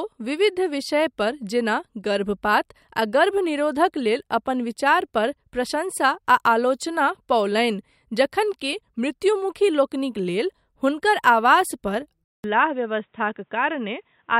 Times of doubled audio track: none

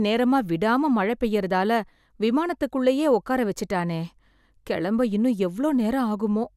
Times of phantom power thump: none

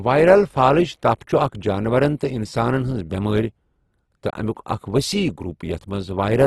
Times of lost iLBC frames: none

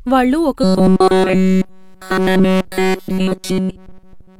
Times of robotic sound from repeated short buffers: 0.64-4.39

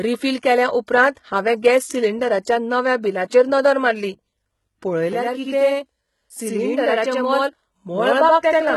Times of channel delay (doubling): 5.13-8.76

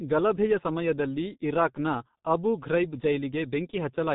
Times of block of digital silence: none

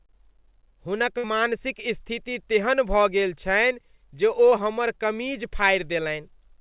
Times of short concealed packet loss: 4.49-4.54

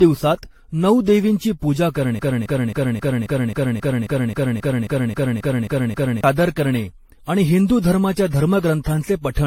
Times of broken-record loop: 2.19-6.24

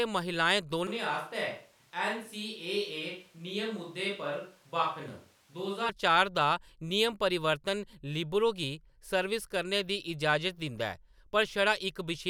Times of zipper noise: none

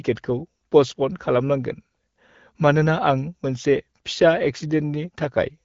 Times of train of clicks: none

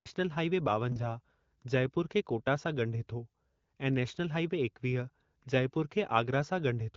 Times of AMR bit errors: 0.88-1.01

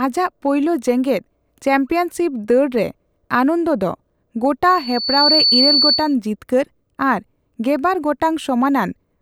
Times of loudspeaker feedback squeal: 4.69-6.15

